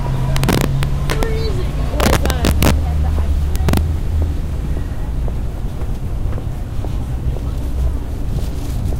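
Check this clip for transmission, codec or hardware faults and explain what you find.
There's integer overflow in three stretches: 0.36 to 1.23 s, 2.00 to 2.71 s, and 3.56 to 3.77 s. In each one the level is pushed roughly 3 to 4 dB past full scale, about 4 dB in the first two and about 3 dB in the last. Instead of being limited, the peaks wrap around to the opposite sign. So you don't hear the flattened buzz of clipping. You hear harsh, violent cracks on the loudest moments, noticeably sharper and nastier than plain distortion.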